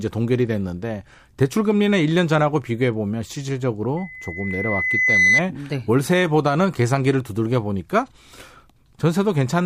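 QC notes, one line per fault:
3.97–5.42 s: loudspeaker feedback squeal. A 2 kHz tone swells over roughly one and a half seconds until it sits about 5 dB above the speech, because the microphone-to-loudspeaker loop gain exceeds unity there. The spectrogram shows one bright horizontal line brightening, and the waveform envelope swells.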